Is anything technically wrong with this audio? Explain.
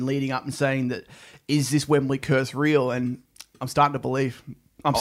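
No, nothing is technically wrong with this audio.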